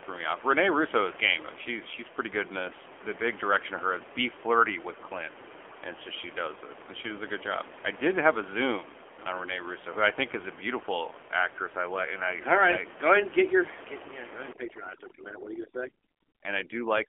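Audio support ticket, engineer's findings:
AMR narrowband mobile codec throughout: band stops near 300 Hz and 3.4 kHz, buzzy synthetic edge on the voice. Sounds like a fairly low rate, around 7.4 kbps, so the few-pulse excitation model gets coarse. Room noise underneath sits about 14 dB below speech and smears into a warble.

Overdone noise removal from 14.53 s to the end at 17.09 s: background suddenly drops and breaks up into twinkly specks. Suppressor gating bands too hard and eating quieter speech detail along with the noise.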